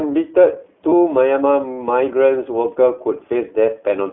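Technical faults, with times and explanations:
Throughout: iLBC codec. Everything sits in a narrow phone band, roughly 300 Hz to 3.4 kHz, with nothing above. The speech has a plainly audible rough, synthetic edge from coding each short frame on its own. The sound fits the 15.2 kbps mode with 20 ms frames.
0.90 to 0.94 s: lost iLBC frames. A brief stretch turns into a held, slightly buzzy vowel as the decoder repeats the last pitch cycle with some noise to cover the gap. The gap fits a single lost 20 ms frame, and the speech snaps back straight away because each frame decodes independently.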